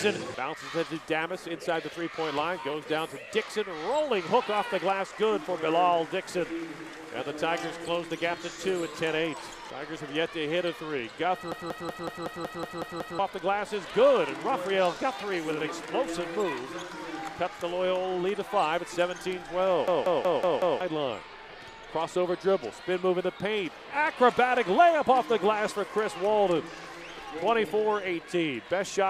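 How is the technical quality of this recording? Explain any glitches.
The recording is marred by two system hang loops. From 11.52 to 13.19 s, and again from 19.88 to 20.81 s, a 186 ms fragment repeats exactly, nine times and then five. Playback froze while the hardware kept cycling one ring buffer, which fits an 8192-sample buffer. At 5.4 repeats per second it sounds like a machine-gun stutter. About 1.5 s and about 1 s of audio are lost.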